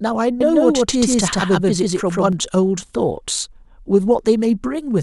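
From about 0.41 s to 2.33 s the speech picks up a doubled audio track: a second full-band copy trails the original by roughly 150 ms at about the same level, so everything sounds stuttered and smeared, like two takes talking over each other. There's no room colour or tail on the copy, and it cuts in and drops out abruptly. The likely culprit is the same signal getting captured again through a slower path.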